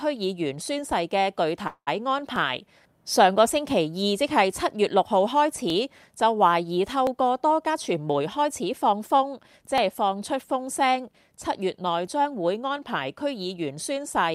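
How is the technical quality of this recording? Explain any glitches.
The recording has three kinds of glitch: repeated clicks, one brief stall, and a stretch that runs fast.

Dropped samples, at 0.66, 2.36, 5.70, 7.07, 9.78 and 12.07 s: the stream likely skipped a fraction of a millisecond each time, so the waveform jumps, giving a sharp single click.

Call audio freeze, 1.67 to 1.89 s: delayed packets likely emptied the jitter buffer, and the receiver stretched the last sound for 194 ms, fading to about 80 ms of silence before resuming where it left off.

Jitter buffer speed-up, 7.67 to 9.14 s: the receiver trimmed short pitch-period pieces to cut about 150 ms of excess delay, so the audio plays at 109% speed with unchanged pitch and sounds hurried.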